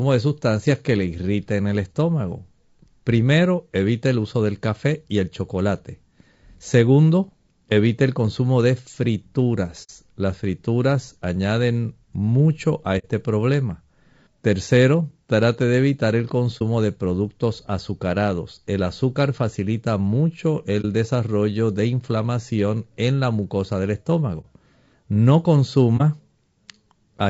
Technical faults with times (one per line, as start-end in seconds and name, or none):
0.00-27.30 low-delay AAC compression
9.83-9.90 AAC frame loss with muting
12.98-13.06 AAC frame loss with muting
16.58-16.62 AAC frame loss with muting
20.81-20.85 AAC frame loss with muting
24.41-24.46 AAC frame loss with muting
25.97-26.01 AAC frame loss with muting